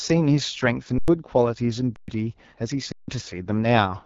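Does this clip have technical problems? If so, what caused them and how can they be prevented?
Yes. The AMR wideband (HD Voice) codec is heard throughout the speech as a rough, raspy texture, with nothing above about 7.6 kHz. The coder models speech up to 6.4 kHz as a vocal tract excited by pulses and fills the band above with shaped noise. At very low rates that excitation is coded too coarsely, which fits the 8.85 kbit/s mode, one of the two lowest. Prevention: negotiate 12.65 kbit/s or higher.

Underrun with held sample occurs three times: 0.98 to 1.08 s (about 97 ms), 1.96 to 2.08 s (120 ms), and 2.92 to 3.08 s (160 ms). Each time the output buffer ran dry, and the converter froze on its last value. The waveform flattens and the sound stops with little or no click. Around a tenth of a second of live audio went missing during the first two gaps, and more during the third. Prevention: enlarge the playback buffer.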